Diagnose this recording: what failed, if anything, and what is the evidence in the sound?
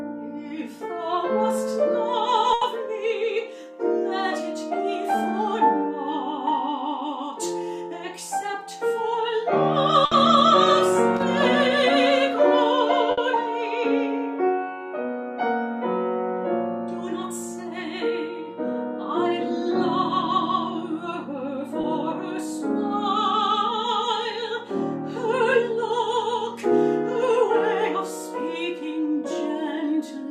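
Burst of packet loss at 2.53 to 2.63 s, 10.05 to 10.13 s and 13.11 to 13.19 s, a network failure. Each time a run of packets arrived too late or not at all, and the receiver stretched the last sound it had across the hole, fading it down: about 80 ms at 2.53 s and 60 ms at the other two. A voiced stretch turns into a held buzz and anything else into a dwindling hiss. Playback then jumps ahead, and that span of sound is lost.

Loose connector crackle at 11.17 to 11.23 s, a fault in the analogue wiring. For about 70 ms the sound breaks up into an irregular scratching crackle. A worn or dirty contact was making and breaking in quick succession, chopping the signal on and off, and any DC on the line added pops.

Short concealed packet loss at 21.81 to 21.85 s, also on the network side. A few hundredths of a second missed the decoder's deadline, and about 20 ms was filled by continuing the preceding sound, from its pitch if voiced or as shaped noise if not, before crossfading back to the real audio. 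It comes through as a brief smear or wobble, and a very short sound there could drop out entirely.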